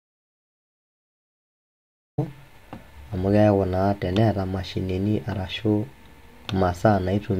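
Speech recording opening in an audio dropout to silence: plain silence, no room tone, until 2.18 s, likely from a lost or muted input.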